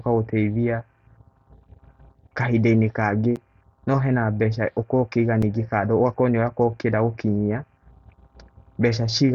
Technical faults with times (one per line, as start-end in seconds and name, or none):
3.36 block of digital silence
5.42 block of digital silence